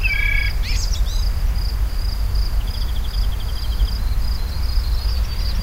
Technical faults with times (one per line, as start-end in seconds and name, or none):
none